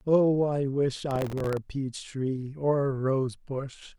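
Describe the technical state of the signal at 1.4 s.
At 1.4 s the speech is inside a burst of processor overload crackle running from 1.11 to 1.57 s. Very short buffers, around a millisecond and a half, miss their deadlines repeatedly. Each miss replays a sliver of old audio with hard edges, heard as gritty tearing.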